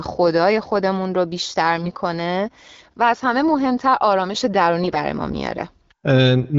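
From 1.76 to 1.90 s and 4.82 to 5.03 s, AMR bit errors flip weakly protected bits and misplace excitation pulses, so the speech briefly goes hoarse and gargly.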